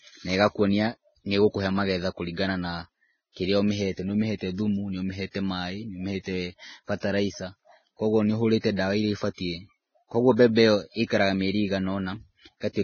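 Vorbis compression runs through the whole clip and is the likely cause of its hissy, grainy speech. Nothing is left above 6.5 kHz, and the remaining treble is quantised so coarsely that detail turns to noise, which points to a very low bitrate of around 17 kbps.

Pre-echo occurs from 7.0 to 7.03 s and from 10.36 to 10.39 s, lasting about 28 and 26 ms. In each case a sharp onset sits late in a transform block, so quantisation noise sized for it leaks into the quiet moment before it, giving a brief hiss and a smeared attack.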